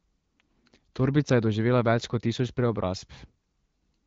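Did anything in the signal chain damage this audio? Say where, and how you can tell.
No, nothing in the signal chain damaged this audio.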